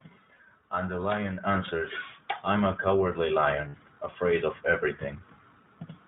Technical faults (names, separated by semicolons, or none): iLBC codec; lost iLBC frames; microphone volume stepped up